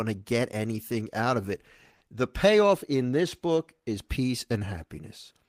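Right from the start, the whole speech clip carries clock drift between sender and receiver. The sender's clock runs roughly 4 percent slow compared with the receiver's, so audio arrives a little behind the rate it's being played out. The jitter buffer keeps draining, and the receiver has to pad things out to avoid running dry. That mismatch sits underneath everything you hear here, which is why the timing feels unsteady from beginning to end rather than at one spot.

You can hear the padding as repeated timing corrections running from about 0.04 s to 5.47 s. The receiver keeps stretching or repeating little pieces, all in the same direction, so playback effectively runs at 97 percent speed. Altogether it adds somewhere around 150 ms to the clip. The edits aren't evenly spaced, and each one is small.

Then at 1.96 s to 2.03 s there's a short stall from a late packet. A packet wasn't there when it was due, the buffer ran empty, and the receiver held the last bit of sound for 50 ms until the data showed up. 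Nothing was lost, and playback picked up right where it left off, but the delay grew by 50 ms. On listening, that's a sound hanging on too long, with a bit of buzz or a dip in it.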